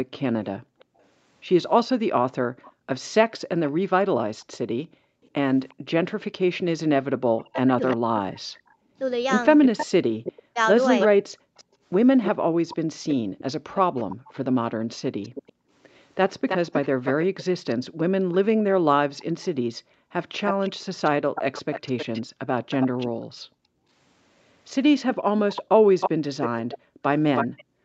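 A speech recording carried over a call, band-limited to nothing above 8 kHz. From 0.17 s to 27.64 s a faint delayed copy of the voice trails about 316 ms behind, roughly 10 dB down. This echo leak is likely a loudspeaker echo the far end's canceller failed to remove. Between 7.25 s and 11.1 s the talker's voice dips sharply and drops out in pieces, adding up to about a second and a half. That is speech suppressed in double talk, likely the canceller ducking everything while both sides spoke. The room sound repeatedly vanishes and returns, falling by up to about 40 dB, during 0.58 to 5.86 s, 11.3 to 15.7 s and 19.77 to 27.84 s. In each of the first two spans the dropouts total around a second. This is background gated by the echo canceller, which clamps the microphone while the loudspeaker is playing.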